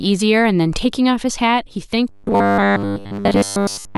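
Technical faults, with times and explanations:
2.09 to 3.97 s, robotic sound from repeated short buffers: new audio likely stops arriving in time, so playback loops a block of about 10 ms the whole way. The repetition forces a steady 100 Hz buzz, leaving the speech rigid and metallic until the end.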